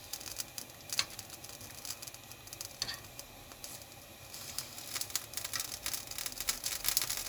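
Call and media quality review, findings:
No faults found in the recording of sounds. Nothing heard calls for a ticket entry or follow-up on any component.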